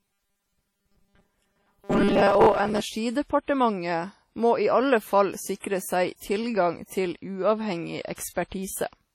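A speech recording that sounds ringing and washy from start to end, with a hiss that rises and falls with the voice. The damage is heavy and likely comes from WMA compression. That transform codec's long blocks smear quantisation noise over tens of milliseconds, and faint spectral detail is simply zeroed. The depth of the damage suggests a low bitrate, something like 32 kbps, and fits the first-generation WMA encoder. From 0.01 s to 2.82 s the voice becomes a rigid metallic buzz locked at 200 Hz, still loosely tracking the speech. This is the robotic sound from repeated short buffers. When fresh audio arrives too slowly, playback refills the gap by looping the last fragment while the real signal is skipped. A fixed 200 Hz pitch means each repeat lasts 5 ms, which fits very short buffers, and most of the audio in that stretch appears to be repeats rather than new material. At about 8.02 s to 8.05 s a sharp attack is preceded by a brief hiss, and its onset sounds softened. 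This is pre-echo, spread over 27 ms. Because the transform codec spreads its noise evenly across a block, noise sized for the loud attack also fills the quiet moment just before it.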